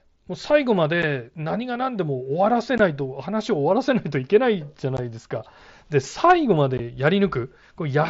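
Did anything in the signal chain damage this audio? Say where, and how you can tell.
Yes, at the Bluetooth link: unconcealed Bluetooth headset packet loss leaves abrupt holes at 1.02, 2.78, 4.97 and 6.78 s, about 7.5 to 15 ms each, where dropped mSBC frames were replaced by silence or an idle pattern.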